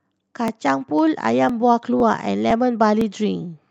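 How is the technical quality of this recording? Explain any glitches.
The recording has a regular glitch from overlapping chunks, six small stutters spaced every half second, heard over the band-limited sound of a call codec.

The overlapping chunks show up at 0.48, 0.99, 1.49, 2.00, 2.51 and 3.01 s. At each join, a new 0.5 s chunk begins about 6.5 ms before the previous one ended, so that sliver plays twice. The result is a tiny click-stutter. Unlike packet loss, nothing goes missing, and the clockwork spacing rules out random network hiccups.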